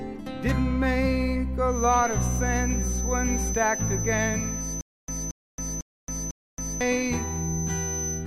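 A loudspeaker-to-microphone loop was likely sitting at the edge of feedback from 1.65 s to the end, producing a thin 6.1 kHz feedback whistle roughly 10 dB under the sound, slowly swelling and fading. From 4.81 to 6.81 s, playback likely stalled and retried, causing a stutter with silent gaps: a 226 ms fragment repeats four times, every 0.5 s, separated by 273 ms of digital silence, and the sound that should have played there is lost.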